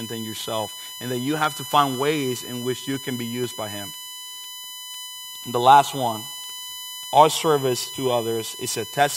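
A USB whine runs through the whole recording. It is a fixed tone at 1 kHz, with its strongest harmonic near 18 kHz. It sits only about 10 dB below the speech. Current drawn in 1 ms USB frames is leaking in through power or ground.

Periodic USB or driver dropouts start at 1.44 s, just after "yourself and that you", and continue to 6.44 s. Every 0.5 s, a sliver of roughly half a millisecond becomes silence. There are about ten, heard as regular ticks. Something blocks the USB bus or driver on a fixed cycle.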